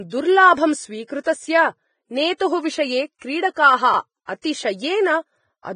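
Throughout the speech the sound is hissy and grainy, with roughened tones and blurred consonant onsets, the heavy damage of low-quality coding, likely Vorbis compression at a rate that fits roughly 20 kbps. The codec keeps a smooth spectral envelope but quantises the detail on top of it so coarsely that the treble turns into noise-like texture. On a spectrogram the energy stops sharply at about 9.7 kHz, and the upper bands look speckled and patchy rather than finely structured.

Pre-echo appears four times, at 1.07–1.09 s, 1.24–1.26 s, 3.19–3.22 s and 4.42–4.44 s, each lasting about 20 to 29 ms. In each case a sharp onset falls late in a transform block. The quantisation noise sized for the loud attack spreads back across the quiet stretch before it, so a brief hiss leads into the attack and the onset sounds softened. On a waveform, low-level noise rises just ahead of each transient instead of silence. 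On a spectrogram, a faint broadband smear precedes the vertical edge of the attack.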